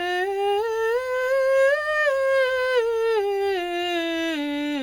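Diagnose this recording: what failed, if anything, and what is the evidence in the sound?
The codec stage is the culprit here, likely transcoding between lossy codecs. The music is band-limited to nothing above 17.2 kHz throughout, with layered artefacts, which fits a Vorbis-to-HE-AAC-to-WMA chain where each encoder re-coded the previous one's damage and kept the lowest cut-off.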